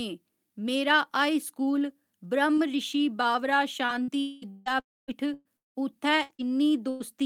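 It's a speech clip, and right after "ब्रहमऋशि बावरा" it turns choppy and robotic from 3.85 to 7.02 s. That's repeated packet loss: eight gaps, the longest 177 ms, each patched by stretching the previous sound, so about 23% of that span is concealment. Inside it, 4.20–4.45 s smears into a fading buzz, and 4.80–5.11 s fades to near silence for about a quarter second before sound returns with chunks gone. Those two stretches are likely long network dropouts.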